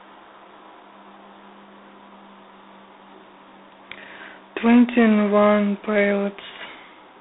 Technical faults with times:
0.00-7.20 G.726 ADPCM

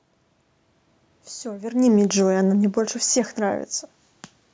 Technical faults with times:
1.52-3.75 automatic gain falling

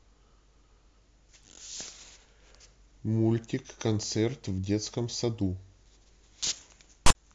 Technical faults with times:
7.06-7.15 file tags played as audio

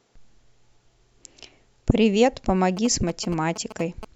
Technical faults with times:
2.77-4.05 GSM signalling bursts

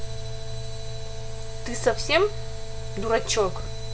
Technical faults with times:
3.60-3.66 chunks out of order

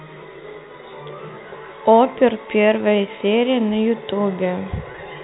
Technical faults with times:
4.92-4.94 packet loss with pitch repetition

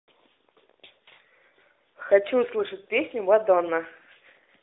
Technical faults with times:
1.14-1.20 lost AMR speech frames
2.82-2.87 lost AMR speech frames

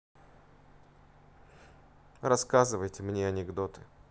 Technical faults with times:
none

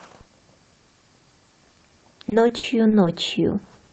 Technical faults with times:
2.29-3.07 repeated packet loss (robotic sound)

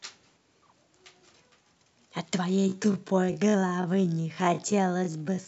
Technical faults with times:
2.48-5.47 time-stretched section

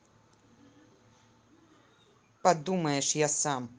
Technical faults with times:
none

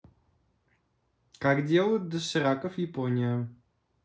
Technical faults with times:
none

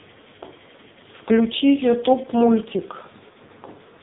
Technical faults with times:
0.00-4.03 AMR narrowband mobile codec

